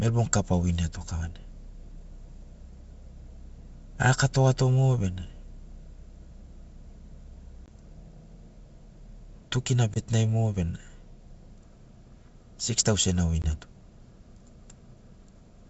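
Packet loss on an ADPCM call breaks the speech at 7.66–7.73 s, 9.94–9.98 s and 13.42–13.45 s. Each time about 20 ms of audio, a single packet, drops to hard-edged silence. The decoder's adaptive predictor and step size then no longer match the sender's, so the speech resumes slightly distorted before settling. Outside the gaps the G.722 wideband sound is clear.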